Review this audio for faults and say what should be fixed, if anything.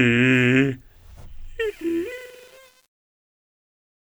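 From 1.60 s to the end at 4.00 s, the music's fade-out turns gritty, worst from 1.70 s onward. That is truncation distortion on a fade. The gain stage keeps too few bits without dither, which fits an 8-bit path, so the waveform collapses into coarse square steps. The fade itself, starting around 1.60 s, is gritty rather than smooth. Apply the fade at high resolution and add dither before any reduction in bit depth.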